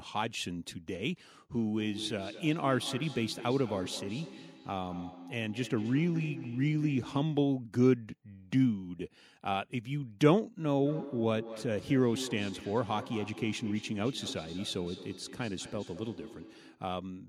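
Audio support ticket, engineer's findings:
Feedback echo between two devices, 1.52 to 7.52 s and 10.63 to 16.93 s. Speech returns at a steady interval of around a fifth of a second, thinner and ringing, loudest about 13 dB and about 14 dB below the speech. Probable component: second device in the same room. Its playback re-enters the other microphone, and neither echo canceller removes sound played by the other device.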